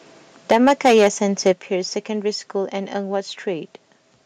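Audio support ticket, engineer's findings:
Microphone overload, 0.51 to 1.08 s and 1.46 to 1.51 s. Harsh crackle on loudest syllables, peaks about 7 dB then about 2 dB over full scale, flat-topped. Likely input gain set too high, driving the converter into clipping.

Microphone volume stepped down, 0.52 s and 1.53 s. Abrupt level drop in speech and background, about 2 dB then about 6 dB, each just after an overloaded peak. Likely automatic gain control in call software cutting device input volume in one step.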